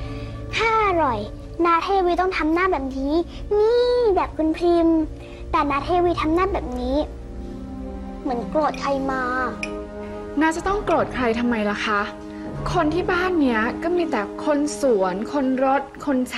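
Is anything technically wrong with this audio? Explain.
No, nothing technically wrong can be heard anywhere in this audio.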